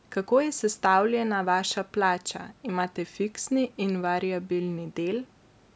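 No technical faults can be heard in this speech.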